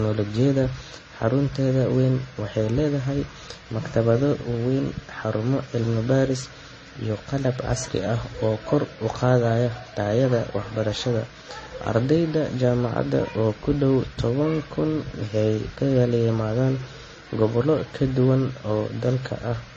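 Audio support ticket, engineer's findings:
Dull, band-limited speech throughout, nothing above 8.3 kHz; artefacts of the different codecs heard together. Likely transcoding between lossy codecs: artefacts consistent with MP3, then AAC-LC, then Vorbis, each near 30 kbit/s. Each stage re-encodes the previous damage and adds its own; the lowest cut-off persists.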